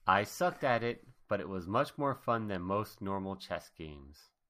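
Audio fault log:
No audible faults found on this speech recording.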